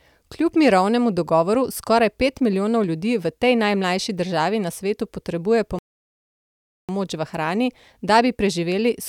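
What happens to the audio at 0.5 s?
Nothing goes wrong at 0.5 s; the speech carries straight through that point without any dropout, click, distortion or other fault.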